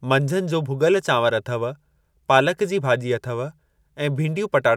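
No technical faults can be heard anywhere in the speech recording, with the signal holding steady and continuous throughout.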